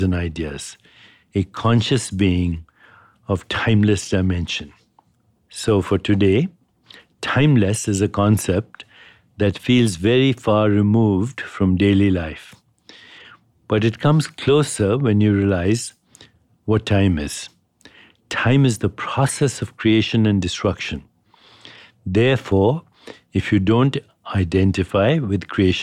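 Nothing stood out on listening to this speech recording.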